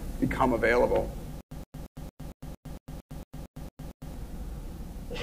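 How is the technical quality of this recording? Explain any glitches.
The recording has one clear glitch. From 1.41 s to 4.14 s there is a stutter with silent gaps. A short burst of about 121 ms plays, then cuts to dead digital silence for about 107 ms. The same burst returns every 228 ms, twelve times in a row. The likely cause is a stalled player or stream that replays its last fragment on each retry, then runs dry. Whatever should have played during those gaps is gone.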